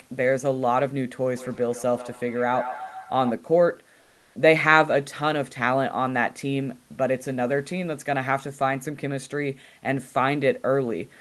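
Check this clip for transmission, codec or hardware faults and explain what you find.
Two faults are audible in this speech clip: an acoustic loop between two devices, and a short stretch where the real room background is replaced by synthetic noise.

From 1.37 to 3.43 s there is feedback echo between two devices. A second device in the same room plays the call back, and this microphone picks it up again. Its echo canceller only removes its own device's playback, so that sound gets through. The speech returns at a fixed spacing of roughly 150 ms, peaking about 11 dB below the direct speech. Each return sounds thinner and more ringing than the one before.

From 4.01 to 4.35 s, a 340 ms gap, there is comfort noise in place of the background. The likely cause is Opus discontinuous transmission (DTX). The sender stopped transmitting when it judged there was no speech, and the receiver filled the pause with generated noise. 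The natural room noise, sitting around 42 dB below the loudest speech, gives way to a flat, featureless hiss. The level shifts by about 3 dB, and the real background comes back when sending resumes.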